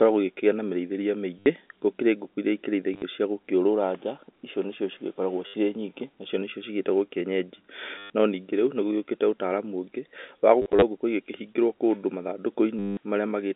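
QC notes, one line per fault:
1.39–1.46 s, 2.94–3.02 s, 5.47–5.54 s, 7.98–8.10 s, 10.62–10.82 s, 12.79–12.97 s: packet loss with last packet repeated. In each gap the receiver loops the last good packet, from 60 to 180 ms of lost audio, with the longest at 12.79 s. At 2.94 s and 10.62 s the loss is scattered, in runs of up to 40 ms. The repeats ignore the pitch period, and runs buzz at about 100 Hz, which fits 10 ms packets. The result is a robotic stutter over the G.711 A-law telephone band of 250 Hz to 3.6 kHz.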